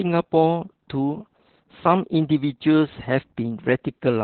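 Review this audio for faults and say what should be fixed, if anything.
Opus voice compression at a very low bitrate damages the speech for the whole clip. The sound points to Opus running its SILK linear-prediction coder in narrowband mode at roughly 8 kbps, with the excitation coded very coarsely. Nothing is left above 4.4 kHz, so the speech sounds muffled and telephone-like, and the starved excitation makes it hoarse and faintly robotic. To prevent this, encode at a higher Opus bitrate so the codec keeps wideband or fullband audio.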